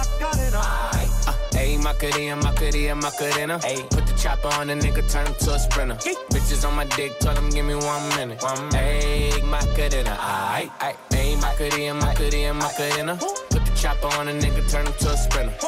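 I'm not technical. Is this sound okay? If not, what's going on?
Yes, nothing in this audio needs fixing.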